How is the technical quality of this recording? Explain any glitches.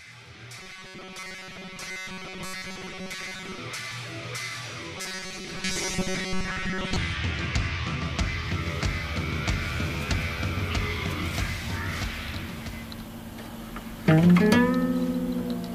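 The recording has a recurring robotic sound from repeated short buffers, in two stretches: 0.58 to 3.59 s and 4.98 to 6.96 s. In both, the sound collapses into a rigid, metallic buzz fixed at 188 Hz, while the original contour survives only loosely. The likely cause is audio arriving too seldom, so a tiny segment of about 5.3 ms is looped to fill the gaps and most of the real material is skipped. On a spectrogram this shows as evenly spaced horizontal harmonic lines at multiples of 188 Hz, and the waveform shows the same short cycle copied over and over.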